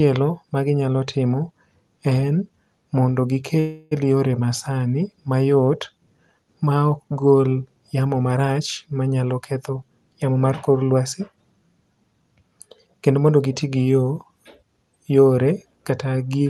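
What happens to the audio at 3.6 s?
From 3.59 to 3.93 s the sound stalls: the last fragment before the break is stretched into a fading buzz for about 0.32 s, then the audio picks up exactly where it stopped, with nothing skipped, so everything afterward runs that much later. This is a call audio freeze, likely caused by packets arriving late so the jitter buffer ran dry and the receiver filled the wait by extending the final sound.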